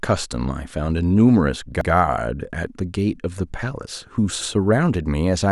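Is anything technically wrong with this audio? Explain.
Yes. This speech has overlapping chunks at 1.81 s and 4.41 s: 2.5-second blocks each restart 100 ms early, so that slice plays twice, heard as a brief stutter. A dropout would leave a gap instead. Here the sound repeats, recurring at the chunk spacing.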